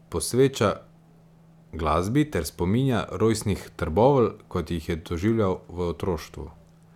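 No technical faults are audible.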